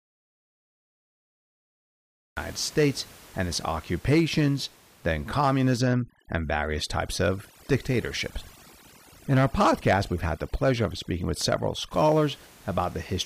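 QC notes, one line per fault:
0 to 2.37 s: audio dropout to silence. The clip opens already in a dropout, silent with no room tone. Sound cuts in abruptly at 2.37 s. The likely cause is a lost input while the recorder kept writing zeros.
5.78 to 11.92 s: overdone noise removal. After "and its occupations then", the room noise, elsewhere about 24 dB below speech, drops and breaks up into twinkling specks. Overly strong noise reduction is gating whole bands, stripping quiet speech detail.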